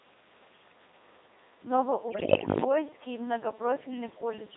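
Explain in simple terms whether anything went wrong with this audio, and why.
Yes. The whole clip has a robotic, buzzy sound because it passed through the Codec 2 vocoder, which rebuilds speech from pitch and tone settings rather than sending the real sound. From 2.08 to 2.64 s, bit errors on digital voice radio make the voice jump in pitch and loudness and break into warbling gibberish, as corrupted bits scramble those settings.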